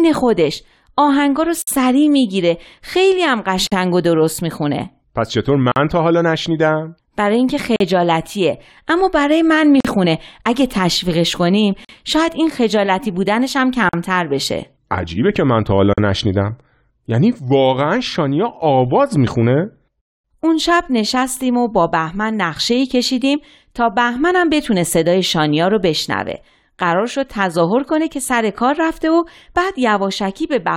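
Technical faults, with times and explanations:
1.62, 3.67, 5.72, 7.76, 9.80, 11.85, 13.89 and 15.93 s: gap at a join of encoded pieces. Abrupt silences of 43 ms (53 ms at first) recur every 2.0 s because each separately encoded piece keeps its untrimmed encoder delay and end padding.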